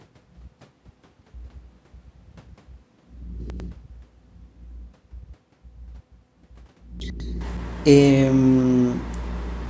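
Throughout the clip there is echo with no canceller: the far end's loudspeaker is picked up by its microphone and returned, so every phrase is trailed, roughly a fifth of a second later, by a faint, thin copy about 25 dB below the speech.

At 3.4 to 3.6 s and again at 7.0 to 7.2 s, chunks play out of order. In each case a 100 ms chunk arrives one chunk late and plays after the chunk that should follow it, so the speech briefly jumbles.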